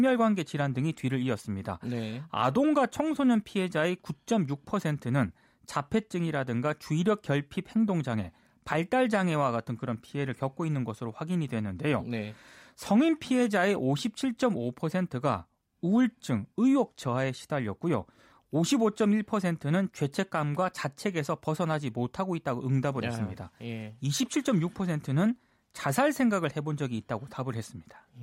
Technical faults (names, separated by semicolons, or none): none